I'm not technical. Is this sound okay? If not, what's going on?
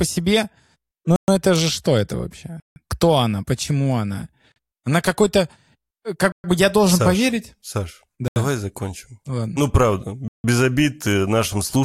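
No. The speech drops out six times in blocks of digital silence: at 1.16 s (120 ms), 2.6 s (160 ms), 4.52 s (40 ms), 6.32 s (120 ms), 8.28 s (80 ms) and 10.28 s (160 ms). Audio cuts abruptly to nothing and back.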